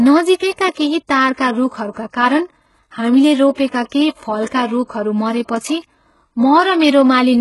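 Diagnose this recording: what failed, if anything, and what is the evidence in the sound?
HE-AAC compression, heard throughout the speech: the treble stops near 11.5 kHz, and s sounds are gritty and metallic. This is likely a codec stage at a very low bitrate, around 12 kbps. Upper bands are rebuilt by copying lower ones upward, so their harmonics misalign.

Pre-echo, a codec-stage fault, appears at 0.72, 1.34 and 1.91 s (just before "कारण हामीले"), at 3.53 s (after "कारण हामीले") and at 3.89 s (before "केही फलका रूखहरू"). Hiss leads each attack by 27 to 53 ms because block-wide quantisation noise spills into the quiet moment before the attack.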